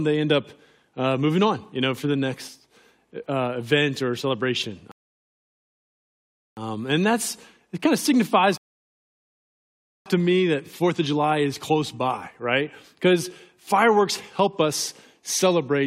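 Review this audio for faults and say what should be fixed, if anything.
Two rebuffering stalls, at 4.92–6.57 s and 8.58–10.06 s, where the player's buffer ran dry. The audio drops to silence for 1.66 s and 1.48 s, then resumes exactly where it stopped. Nothing is lost, but the clip runs longer. To prevent this, use a larger playback buffer or adaptive bitrate switching so that download keeps ahead of playback.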